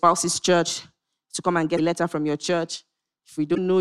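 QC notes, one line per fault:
1.77–1.79 s and 3.54–3.58 s: broken MP3 bit reservoir, likely. The spots last about 26 ms and 40 ms, against 24 ms frames. The speech skips ahead, and a brief garbled chirp, noise burst or short hole fills the gap. After frames drop out of an MP3 stream, the next surviving frame reaches back into the bit reservoir for data it stored earlier. It finds bytes from a different frame, so the decoder renders garbage until clean frames resume.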